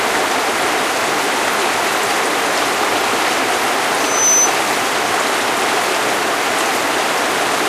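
A clip of everyday sounds, and there's a loudspeaker feedback squeal in it from about 3.96 to 4.54 s. A single tone at 6.1 kHz swells up over roughly a third of a second and ends up sitting a few dB above the rest of the sound. That's the mic hearing the speaker it's feeding: around 6.1 kHz the loop gain tipped past one, so that frequency kept reinforcing itself until it was held in check.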